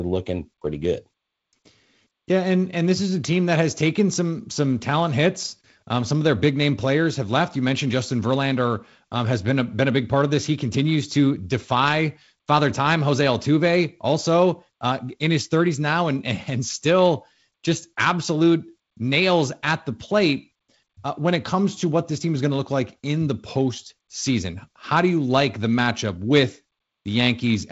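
No technical faults can be heard anywhere in the speech. It has passed through G.722 wideband telephone coding at 48 kbit/s, which leaves nothing above about 7.7 kHz and only light coding roughness, a faint hiss in the upper band and a slightly noisier lower band from the reduced bit allocation.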